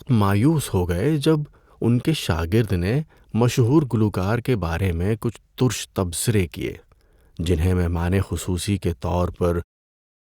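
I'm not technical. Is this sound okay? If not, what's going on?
Yes, nothing stood out on listening to this speech, and the gentle fade-out at the end, from about nine and a half seconds to 9.65 seconds, is just a normal editing touch.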